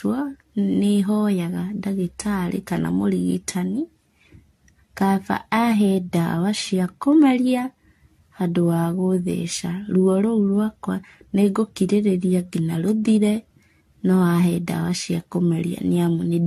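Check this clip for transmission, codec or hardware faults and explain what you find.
One codec fault runs through the whole clip: generation loss. From start to finish, the speech sounds swirly and hollow, and consonant attacks are blurred. Nothing is audible above 14 kHz, which fits AAC at about 64 kbit/s. The likely cause is roughly seven successive encodes, each re-quantising on a shifted frame grid so the errors pile up. A single encode at that rate would not sound this smeared.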